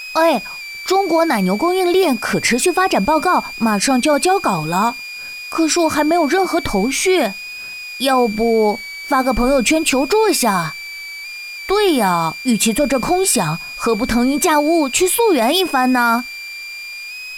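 From start to finish, a switching supply whistle sits under the sound. It is a high, thin tone wandering between about 2.28 and 2.53 kHz, roughly 15 dB below the programme. A power converter is cycling at an audible rate. Its pitch drifts with load.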